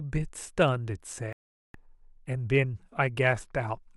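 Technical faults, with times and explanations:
1.33 to 1.75 s, digital broadcast dropout: the speech stops abruptly and a silent hole of about 0.42 s follows before the speech resumes. Nothing from that stretch ever comes back. The receiver stopped getting usable frames, either because the signal was lost or because frames failed their error checks. Rather than play corrupted data, it muted the output until valid frames arrived again, so everything broadcast during that gap is permanently missing.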